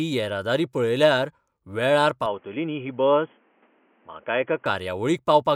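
At 2.26 s the sound suddenly goes narrow and boxy: everything above about 3.4 kHz disappears, with no gap at the changeover and no real jump in loudness. A faint new noise floor comes in too, well down under the speech. That band limit fits a telephone-style path, so the likely cause is the input switched to a poorer device, such as a headset's call profile. At 4.66 s the full, brighter sound returns.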